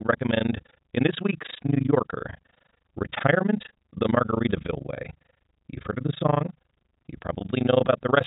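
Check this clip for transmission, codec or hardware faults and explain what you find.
Two faults are present in this speech clip, carried over a G.711 A-law telephone path that limits the band to below 4 kHz.

Overlap-add ripple runs throughout. The frames were reassembled with windows whose overlap does not sum to a constant gain, so the level swings by about 60 dB once per frame, at around 30 Hz. This produces a harsh, robotic tremolo over everything.

Packet loss with pitch repetition occurs from 4.96 to 4.98 s. About 20 ms of audio went missing, which fits a single lost packet. The receiver filled the gap by repeating the last pitch period, which is heard as a brief held, buzzy tone.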